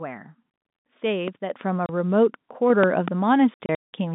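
At 1.28 to 1.30 s a loud pop cuts sharply through the speech, peaking well above it at around 15 dB, while the speech continues underneath. It sounds like a single voltage pulse, likely from a switch, plug contact or static discharge, which the downstream circuitry shapes into a short thump.

At 1.50 s the microphone volume is stepped up. Speech and background both jump by about 7 dB at once, consistent with the call software raising the input gain in a single step.

From 1.86 to 1.89 s, packet loss filled with silence leaves a 30 ms hole with hard edges, which fits one lost 30 ms packet replaced by silence.

Between 2.84 and 3.10 s, two more loud pops of similar strength sit on top of the speech, likely from the same kind of electrical transient.

From 3.54 to 3.93 s the packet loss is heavier. About 270 ms of silence is scattered over 390 ms, with the longest gap lasting 180 ms, which points to nine lost packets. 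The speech sounds chopped.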